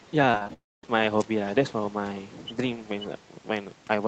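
From 0.0 to 0.1 s, a faint second voice sits far below the talker. This is likely the other side's voice leaking through, missed by the echo canceller.

From 0.31 to 0.90 s, repeated packet loss makes the sound choppy and robotic. Six short holes, the longest about 39 ms, are patched by stretching the previous sound.

From 0.53 to 0.85 s, the audio drops out for about 0.3 s. A brief fading continuation gives way to roughly a quarter-second of silence, likely a long network dropout. The lost stretch never returns.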